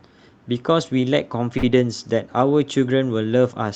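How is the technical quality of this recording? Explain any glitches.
There is one glitch in the speech: a short stall from a late packet at 1.57 to 1.66 s. The audio has passed through a call codec, and its top end stops at about 8 kHz.

At 1.57 s, a packet missed its playout time and the jitter buffer ran dry. The receiver covered the gap by stretching the last stretch of sound for about 54 ms, then resumed exactly where it had stopped. Nothing is lost, but playback falls about 54 ms behind from that point. What you hear is a sound held unnaturally long, with a faint buzz or dip before normal flow returns.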